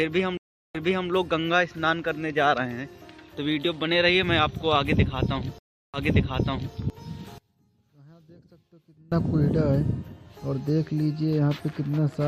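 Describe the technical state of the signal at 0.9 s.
A stream reconnect spans 0.37–1.09 s: the connection dropped and a new decoder started, leaving 372 ms of silence, then audio resuming 340 ms back, repeating.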